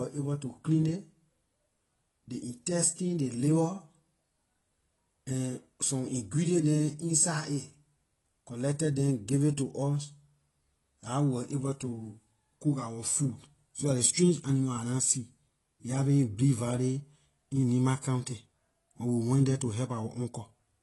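From the start of the speech to the end, the audio carries the signature of AAC compression, likely AAC-LC at a low bitrate in the region of 32 kbps. Nothing is present above 11.5 kHz, so the speech sounds dull. The codec damage is plainly audible: with too few bits for the 1,024-line frames, the encoder discards or coarsely quantises much of the upper spectrum, leaving a smeared, watery texture on sustained sounds and a fizzy edge on sibilants.

At 13.75 to 13.78 s there is pre-echo ahead of a sharp onset. A brief smear of hiss, about 33 ms long, sits just before the attack. The transform spreads its quantisation noise across the whole block, so the noise meant to be masked by the loud transient leaks into the quiet moment before it. The attack itself also sounds softened rather than crisp.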